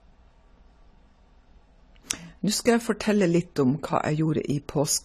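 From the start of the speech to the end, the audio carries plainly audible codec damage, most likely AAC compression of the AAC-LC kind. Nothing is present above 14.1 kHz, so the top of the band is cut off and the sound is dull. The coder has had too few bits for the spectrum, which fits a low rate around 32 kbps, so sibilants turn fizzy and sustained sounds take on a smeared, warbling texture.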